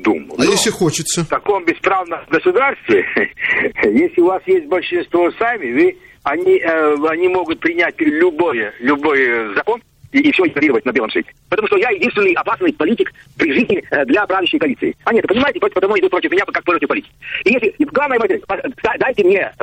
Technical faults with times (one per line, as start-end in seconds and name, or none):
0.00-19.62 MP3 compression
9.53-19.62 time-stretched section